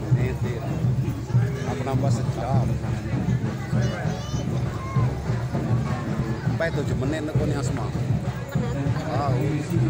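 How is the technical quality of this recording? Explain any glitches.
The quality suffers from four short glitches where frames out of order scramble the sound, at 1.11–1.20 s, 2.37–2.46 s, 4.71–4.80 s and 6.07–6.20 s. In each, two neighbouring blocks of decoded audio were played back swapped, 40 ms each in the first three and 60 ms in the last, which fits runs of two and three frames. The stretch comes out as a garbled flutter, though nothing is lost from the timeline.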